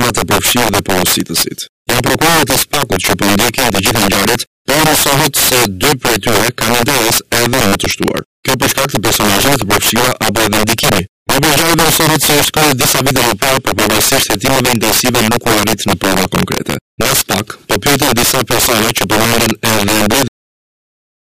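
Integer overflow runs through the whole clip: with the signal driven about 8 dB past full scale, roughly seven percent of samples exceed the integer limit and wrap to the opposite sign instead of being held there. Each loud peak therefore snaps across the entire range, giving violent cracks far harsher than ordinary clipping.

A cut-off end arrives at 20.28 s, where the final stretch of audio was never written or played out. The sound halts mid-event and falls straight to digital silence with no decay, leaving dead air for the last second.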